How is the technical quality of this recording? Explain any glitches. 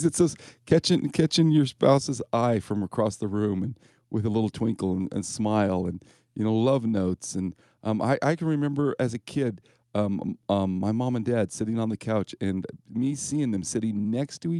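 The recording has one level glitch, a sudden drop in loudness early in the clip, heard through a call path whose Opus coding noise and upper limit near 12 kHz are audible.

At 1.98 s the level falls by about 5 dB in a single step. Speech and background drop together, which points to a gain change at the source rather than in the content. The likely cause is the microphone volume being stepped down: the call software judged the input too hot and cut the device's input gain in one move. What follows sounds uniformly quieter, with no fade between the two levels.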